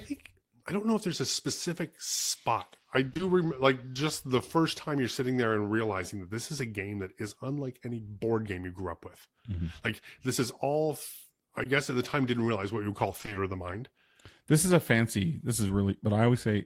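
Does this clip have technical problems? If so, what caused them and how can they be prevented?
Yes. Short concealed packet loss occurs at 3.09 to 3.21 s, 3.93 s, 11.63 s and 15.67 s. Missing packets were patched by extending the previous sound, leaving brief smears. Prevent this with a more stable network path and a larger jitter buffer.

Repeated packet loss (robotic sound) appears from 13.17 to 13.37 s. Five gaps left half the span concealed, so the sound turns choppy. Prevent this by reducing congestion or enabling forward error correction.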